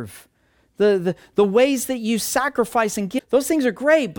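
From 3.15 to 3.21 s, damaged data in the compressed stream throws the decoder out of sync, causing a brief disruption in the speech.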